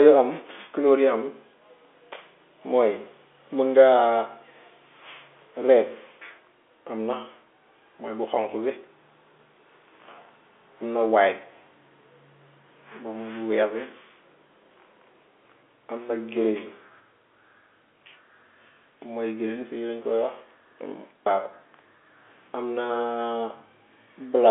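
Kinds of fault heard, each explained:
Nothing stood out on listening to this speech over its telephone-band line.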